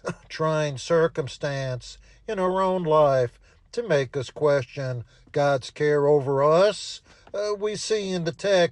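No technical faults can be heard anywhere in the clip.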